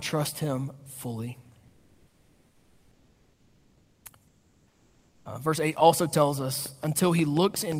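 From 1.67 to 4.05 s, after "trust him fully", and again from 4.27 to 5.25 s, comfort noise replaces the background. The real room sound gives way to a steady, featureless hiss about 2 dB and then about 1 dB quieter, likely from discontinuous transmission filling pauses. Unlike a noise gate, the pause never falls to silence.

From 6.66 s to the end, after "also tells", a train of clicks ticks at about 5.6 per second. The pulses are regularly spaced, alike in shape and louder than the speech, likely from electrical interference. Random dropout pops would come at uneven times and in varied shapes.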